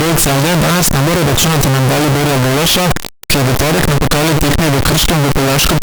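From start to finish the speech comes through as very loud, harsh distortion, with quiet stretches as loud as everything else. The likely cause is signed and unsigned mixed up in the 8-bit samples, flipping the top bit so each zero crossing leaps across the whole range.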